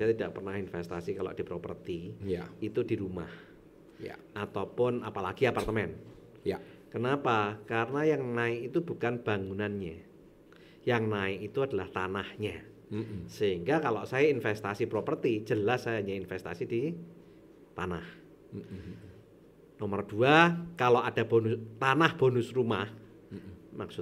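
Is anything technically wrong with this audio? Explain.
No, the signal shows no technical faults anywhere in the recording.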